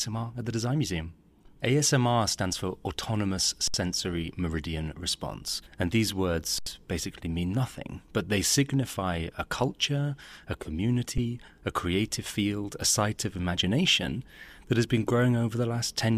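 Speech clip with an underrun with held sample three times: the output buffer ran dry and the converter froze on its last value, at 3.68–3.74 s (64 ms), 6.58–6.66 s (80 ms) and 11.18 s. The speech flattens into silence, then resumes where it stopped, without a hard click.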